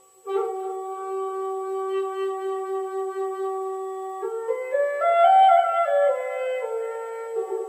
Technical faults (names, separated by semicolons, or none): none